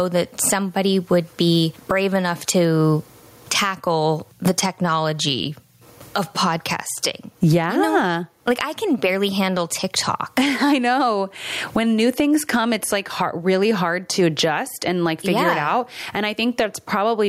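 Gain pumping runs through the whole speech clip. The level swing is large, about 25 dB. The likely cause is input gain set far too high, with a fast limiter or compressor clamping down on each peak. Loud and quiet passages sit unnaturally close in level. The result sounds squashed.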